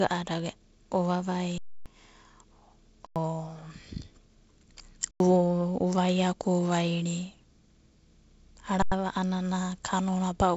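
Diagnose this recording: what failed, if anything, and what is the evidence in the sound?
The failure is at the driver or buffer stage: an underrun with held sample, heard four times in this wideband speech, which has the band-limited G.722 telephone sound. At 1.58 s the sound freezes flat for about 0.28 s, then shorter 93 ms stalls follow at 3.07, 5.11 and 8.82 s. Each time the output buffer emptied and the converter held its last value. Roughly that much live audio was lost. The repeated 93 ms gaps fit a 4096-sample buffer.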